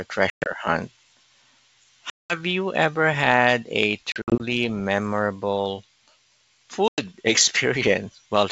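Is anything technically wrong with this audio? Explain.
Yes, there's packet loss on an ADPCM call, with four dropouts: 0.30–0.47 s (broken up), 2.10–2.40 s just before "you ever had a", 4.12–4.41 s right after "you ever had a" (scattered), and 6.88–7.02 s. Each gap is hard-edged silence. Because the decoder's predictor and step size lose sync with the sender, the speech comes back slightly distorted, and it settles after a few tens of milliseconds. The G.722 wideband coding itself sounds clean.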